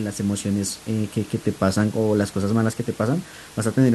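No technical faults can be heard in this speech clip. A steady room noise sits about 21 dB below the speech, and it belongs to the recording space rather than to the system.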